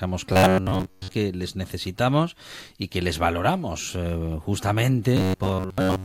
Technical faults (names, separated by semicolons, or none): robotic sound from repeated short buffers